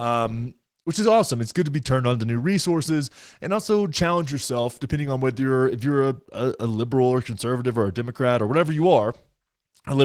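Opus voice compression runs throughout. Coarse hybrid coding, consistent with a rate near 16 kbps, leaves the speech plainly hoarse, grainy and slightly robotic.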